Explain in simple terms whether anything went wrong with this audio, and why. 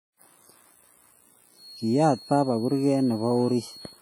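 The whole clip of speech sounds washy and ringing, with a hiss that swells and fades along with the voice. That smeared, underwater quality is the kind of damage WMA compression leaves, likely from squeezing the audio too hard, so quiet detail gets thrown away.

From about 1.5 s to the end, a thin, steady high whistle near 4.3 kHz sits quietly behind the speech, swelling and fading slowly. This is a feedback whistle, likely a loudspeaker leaking back into the microphone and ringing on one pitch without quite taking off.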